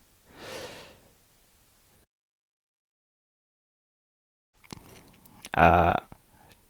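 Speech that goes silent from 2.91 to 4.69 s, about 1.6 s of audio lost, then resumes further on: likely a long network dropout.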